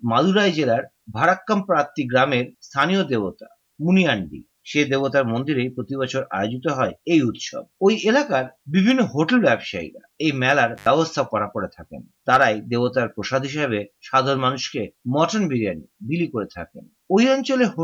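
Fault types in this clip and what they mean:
Intermittent contact: a loose plug or cable connection briefly opening the signal path. At 10.76 s the sound cuts out for roughly 90 ms, with crackle at the break and at the reconnection at 10.87 s, and faint hiss remaining while the line is open.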